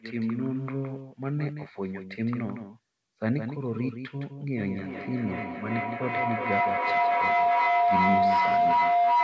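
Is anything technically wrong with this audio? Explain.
Yes. There are two faults in this speech clip.

A doubled audio track runs through the whole clip. A second full-band copy of the speech trails the original by roughly 150 ms, about 10 dB quieter. The likely cause is a second, slower capture path, or an edit that left two copies out of step. The copy has no decay and no room colour. It sounds like a flat slapback sitting behind every syllable.

A feedback howl starts at 4.57 s and lasts to the end, at about 9.2 s. Two devices in the same room are on one call. Each trip from loudspeaker to microphone adds level, so the repeats grow instead of fading. They narrow to a tone of roughly 700 Hz that pulses about every 400 ms, which matches the loop's delay. At its loudest it sits about 7 dB above the speech. It doesn't stop, because nothing breaks the loop. The audio has no content above 8 kHz, which fits a G.722 call codec.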